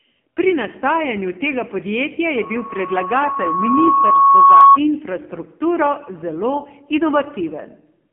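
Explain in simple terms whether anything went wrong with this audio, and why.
The whole clip has passed through the AMR narrowband mobile codec, the speech codec used on older phone networks. It keeps only a narrow phone band, roughly 200 Hz to 3.5 kHz, and nothing above about 3.7 kHz. Heavy compression makes the voice sound buzzy, muffled and synthetic.

From 2.34 s, just after "nastajanju tega podjetja", a loudspeaker feedback squeal appears. A microphone picked up its own loudspeaker, and a single 1.1 kHz tone fed on itself. It grows over about two seconds until it is much louder than the speech, then stops at 4.78 s, before "infrastrukturo zelo".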